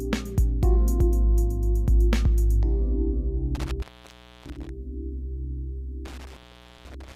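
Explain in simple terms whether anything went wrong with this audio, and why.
Intermittent contact shows up twice, at 3.55 to 4.69 s and again at 6.05 to 7.16 s. A loose plug or cable briefly loses its connection, so the sound drops out for about 0.64 s and then 0.48 s, with crackling as contact breaks and returns.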